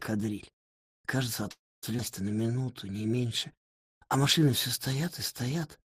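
At 1.51 s the audio stops advancing, and the last sound is carried on briefly as a fading buzz or hiss before dropping to silence for about a quarter of a second. Playback resumes at 1.85 s exactly where it left off, so about 311 ms has been inserted and nothing is lost. This is a call audio freeze, likely caused by packets being held up in transit until the jitter buffer ran dry.

Shortly after, between 1.97 and 2.00 s, there is a skip ahead. A stretch of roughly a fifth of a second never reaches the output, either dropped in transit or discarded when the jitter buffer overflowed with later audio already queued. Only a 16 ms fill bridges the gap, so the sound on either side is butted together almost directly and the jump is abrupt.

From 2.35 to 4.52 s a jitter buffer slow-down follows. The buffer was running low or had just raised its target delay, so the receiver stretched the playout by repeating single pitch periods and slices of pauses many times over, adding 189 ms in total. 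Over this span the audio runs at about 92% speed with the pitch unchanged. Sustained sounds come across drawn out.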